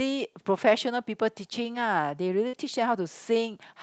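At 2.47 s a burst of packet loss interrupts the speech for about 85 ms, until 2.56 s. The receiver hides the gap by carrying the last sound forward for about 55 ms while fading it down, heard as a brief held buzz or dimming hiss. The speech then resumes with roughly 60 ms skipped. On a spectrogram the harmonics flatten into steady bands that fade, then jump. The waveform shows a shrinking, repeating segment before the abrupt restart. Content above 8 kHz is absent throughout, which fits the call codec's band limit.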